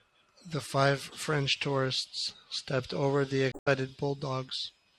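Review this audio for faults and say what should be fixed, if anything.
Damaged data in a compressed stream at 3.49 to 3.68 s, right after "tourists stepped over the": corrupted bytes make the decoder misread frames, lose sync and hunt for the next frame header, giving a brief disruption in the speech. Checksummed transport and verifying file integrity before decoding would prevent it.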